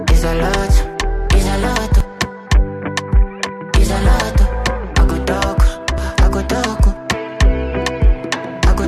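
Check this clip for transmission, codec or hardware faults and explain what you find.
Two small skips, both from an overlap between stream segments. At 2.00 s and again at 5.98 s the audio jumps ahead, by about 8 and 14 milliseconds respectively. Where two segments' timestamps overlapped, the player trimmed the overlap even though that stretch wasn't actually doubled, so a sliver of real sound went missing and the waveform snapped across the gap. You hear it as a tiny click or hiccup. The two events sit about 4 s apart, matching 4-second segment boundaries.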